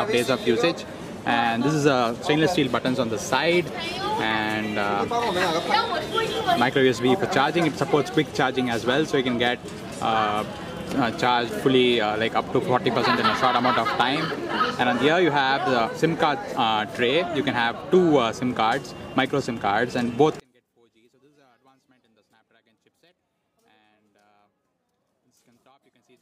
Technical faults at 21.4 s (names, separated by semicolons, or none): one channel inverted